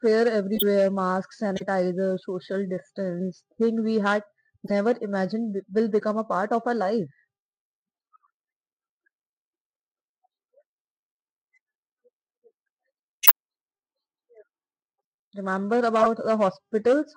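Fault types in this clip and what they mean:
Corrupt frame decoded: Damaged bits in compressed frames were decoded anyway, so misread gains and codes put energy at the wrong frequencies. Each hit lasts about as long as the damaged frames and sounds like a chirp or burst of noise. They fall at 0.55, 4.66 (right after "distance thing we had"), 6.00 (just before "a part of our"), 13.23, 14.96 and 15.98 s. The ones at 0.55, 13.23 and 15.98 s are loud. The one at 14.96 s is barely audible.
Compressed frames skipped: Whole compressed frames were never played. They were missing, or the decoder rejected them as broken. At 1.56 s the sound jumps ahead by roughly 20 ms and then resumes slightly further on.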